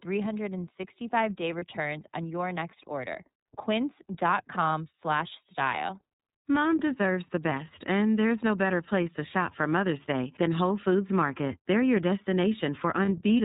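iLBC codec coding runs through the whole clip. This narrowband VoIP codec codes each frame's excitation on its own, and the 30 ms frame rhythm and sound quality fit its 13.33 kbps mode. Nothing above 4 kHz survives, so the speech is band-limited. The coding damage is plainly audible as a rough, synthetic edge on the speech, the product of rebuilding each frame from a compact model rather than the original waveform.

Lost iLBC frames appear at 1.58 s, just before "on your next order", where about 30 ms of audio went missing. The decoder covered the gap by repeating the last pitch cycle blended with noise, so the speech briefly turns into a held, buzzy or breathy vowel. Each iLBC frame is decoded independently, so the speech recovers almost immediately.

Lost iLBC frames occur again at 13.05 s, once more about 30 ms long and concealed the same way. The same brief sustained, buzzy or breathy vowel fills the gap, and the speech returns to normal right after.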